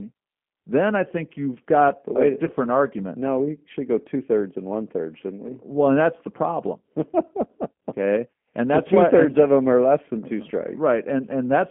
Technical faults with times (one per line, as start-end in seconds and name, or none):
0.00-11.70 G.729 codec
2.45-2.51 VoIP packet loss concealed by the speech codec